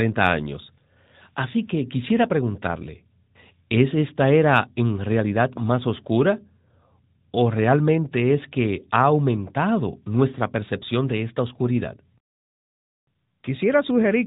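The speech has passed through an AMR narrowband mobile codec from start to finish, coding it at 8 kHz and rebuilding it from a vocal-tract model fed by sparse pulses. The degree of damage fits a mid-rate mode around 10 kbps. Everything above about 3.8 kHz is gone, so sibilants and breath lose their edge. The coding damage is plainly audible, with a buzzy, synthetic quality in place of natural vocal texture.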